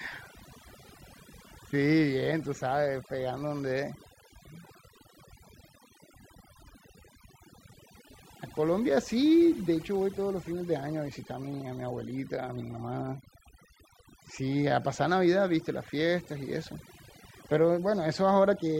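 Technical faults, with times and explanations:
throughout: overdone noise removal. The noise reduction was set too strong, so frequency bands near its noise estimate are pulled far down or cut entirely, taking quieter parts of the speech with them: the background drops and breaks up into twinkling specks.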